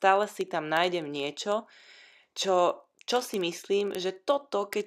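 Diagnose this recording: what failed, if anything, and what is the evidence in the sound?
A steady rattle of sharp ticks of uneven strength runs under the speech from 0.13 s to 4.84 s, roughly every 40 ms, well over a hundred in all. These are word clock ticks at the digital link: the receiver runs on its own clock, about 500 ppm off the sender's, so each slip drops or repeats one sample.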